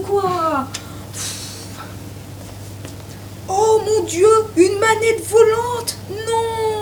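Low bit depth without dither runs through the whole clip: the audio carries a grainy distortion that shifts with the signal, with error sitting only about 25 dB below it, which fits a 7-bit word likely rounded without dither, so quiet passages turn gritty or sputter.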